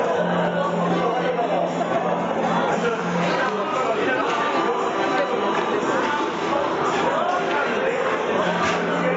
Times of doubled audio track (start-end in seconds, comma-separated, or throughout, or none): none